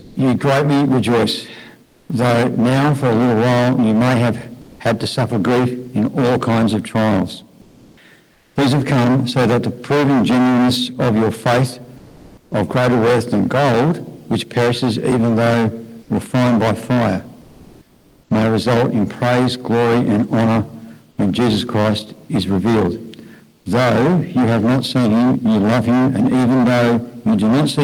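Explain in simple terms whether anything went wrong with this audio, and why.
Hard clipping runs through the whole clip. The signal is pushed far past what the recording chain can hold, so roughly a third of it has its peaks sliced flat, giving a harsh fuzz on loud parts.

The opening sound is dropped by the voice detector between 0.01 and 0.15 s. The sender likely mistook the start for background, so the first fraction of a second is replaced by steady noise or near silence.

Comfort noise replaces the background at 1.85–2.09, 4.61–4.79, 7.61–7.97, 8.33–8.55, 11.97–12.51, 17.41–18.29 and 23.57–23.65 s. In each gap, the natural room sound becomes a flat, featureless hiss, slightly louder at 11.97 and 17.41 s.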